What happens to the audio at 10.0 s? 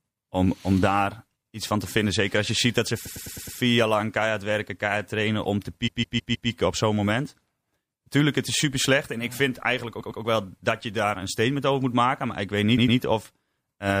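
A run of compressed frames was delivered more than once between 9.99 and 10.20 s, right after "ik vind eigenlijk" and before "wel dat je daar". The decoder plays a 104.5 ms block two extra times, which fits a run of four frames, so the speech stutters and runs 209 ms longer.

Underneath, the audio has the watery, swirling texture and dulled treble of a low-bitrate encoder starving weak frequency lines, most likely MP3 compression at around 64 kbps. The damage is plainly audible, with smeared consonant attacks.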